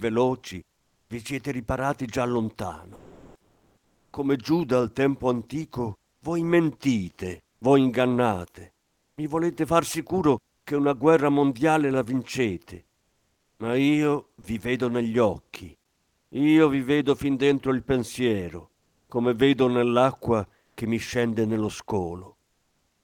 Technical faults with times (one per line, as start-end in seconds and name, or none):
0.77-10.65 sound chopped by the voice detector
12.95-16.31 comfort noise in place of the background
14.41 sound dropped by the voice detector
18.79-20.77 comfort noise in place of the background